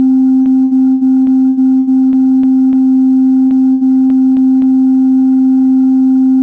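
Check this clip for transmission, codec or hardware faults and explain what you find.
Yes, there is a transmission fault in this music clip: repeated packet loss (robotic sound), in two stretches, from 0.42 to 2.75 s and from 3.47 to 4.66 s. Packets went missing nine times in the first stretch and five times in the second, with gaps of up to 80 ms. Each time, the receiver covered the hole by extending the last sound it had. About a fifth of each stretch is patched this way, so the music turns choppy, with fragments dropped out. On a waveform, short flattened or repeated segments break up the envelope. A spectrogram shows smeared, frozen harmonics where the patches sit. The call path carries nothing above 8 kHz, which fits the G.722 codec.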